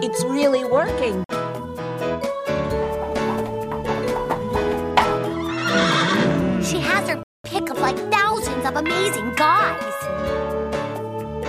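Two dropouts to silence: a short one at 1.24 s lasting about 51 ms, then a longer gap at 7.23 s running 211 ms before the audio picks back up. That pattern points to a likely Bluetooth stall, where held-up packets let the headphone buffer run dry.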